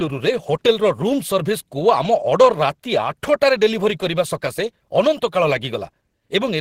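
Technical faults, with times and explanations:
Nothing stood out on listening to this speech clip.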